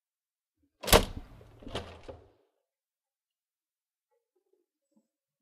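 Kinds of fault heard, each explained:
No fault of any kind turns up here; the sound just runs its course with nothing going wrong along the way.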